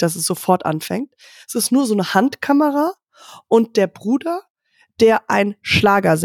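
Speech, with no technical fault audible anywhere in it. Nothing in the recording calls for a time or a cause to be given.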